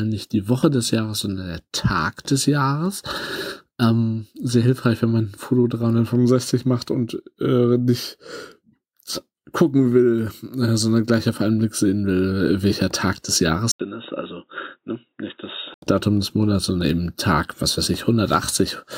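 From 13.7 to 15.8 s the audio drops out for 80 ms, then returns noticeably quieter and dull, with nothing above 3.8 kHz: likely an input switched to a poorer device.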